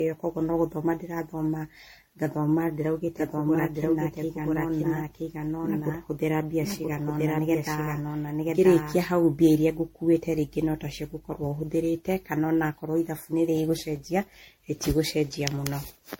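From start to finish the speech has generation loss. It is likely the result of repeated lossy encoding, around seven passes, which fits MP3 at 64 kbit/s. Nothing sounds above 16.6 kHz. The tone is swirly, hollow and smeared, and consonant attacks blur.

From 3.17 s to 8.99 s there is a doubled audio track. A second full-band copy of the speech runs about one second behind, at roughly the same level. It is likely a duplicated capture path. The copy starts and stops abruptly, with no room colour.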